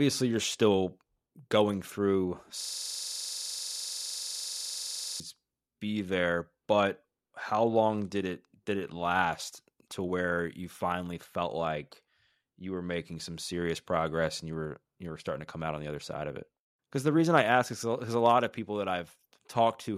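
From 2.61 to 5.2 s the speech locks into a system hang loop. The driver stalled while the hardware kept replaying one 42.67 ms slice of its ring buffer, which fits a 2048-sample buffer, about 61 times, giving a rough 23.4 Hz machine-gun stutter.

At 7.49 s there's a tiny repeated buffer. Fresh audio missed its slot, so the device replayed its last 1.45 ms chunk twice more, which points to a 64-sample buffer. It's too short to stutter and comes across as a brief click, with essentially nothing lost.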